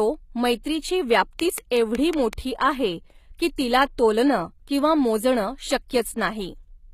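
The whole speech clip carries plainly audible codec damage that sounds like HE-AAC compression, likely at a low rate around 20 kbps. The top end isn't the real thing. The codec keeps the lower spectrum and fakes the treble by copying lower bands upward under a coarse envelope, so harmonics don't line up across the crossover and the highs come across synthetic and gritty. Nothing survives above about 14.9 kHz.

At 0.63 s there's a pre-echo. A sharp attack landed late in a transform block, and the quantisation noise meant for the loud part got spread into the quiet moment just before it. What you hear is a brief hiss, smeared over about 16 ms, running ahead of the onset, which makes the attack sound soft rather than crisp.

From 1.40 to 2.34 s a train of clicks sits on top of the speech. There are about seven of them, evenly spaced at roughly 5.3 per second, peaking around 15 dB above the signal and much the same shape as one another. 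It comes across as steady ticking over the speech. The likely cause is pulses from outside the audio itself, such as interference from nearby equipment or a faulty connection or power supply.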